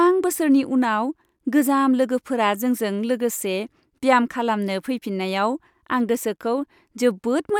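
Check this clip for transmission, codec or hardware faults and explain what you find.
Nothing in the speech stood out as a fault on listening.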